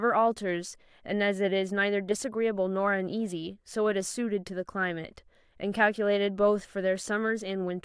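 No audible faults anywhere in the speech recording; nothing to flag.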